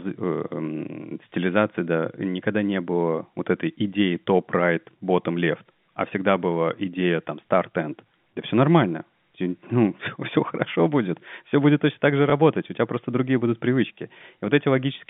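At 12.3 s there is a small blip, a repeated fragment lasting about 20 ms. This is packet loss with the last packet repeated. A gap of roughly that length, which fits a single 20 ms packet, was filled by replaying the preceding stretch of speech. Throughout, the speech has the narrow telephone band of G.711 coding.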